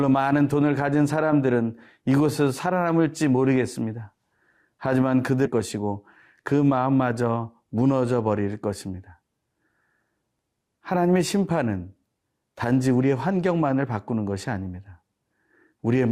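A speech clip with one fault. At 5.45 to 5.48 s the speech jumps abruptly forward, marked by a brief blip. The likely cause is a stream segment skipped: one piece of the segmented stream failed to load, and playback continued from the next.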